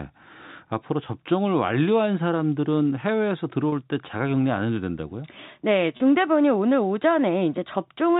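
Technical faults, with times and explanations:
3.70–3.72 s and 5.97–6.00 s, packet loss with pitch repetition: each spot sounds like a brief held, buzzy note. About 30 ms of speech went missing each time, which fits a single lost packet. The receiver bridged the gap by repeating the last pitch period.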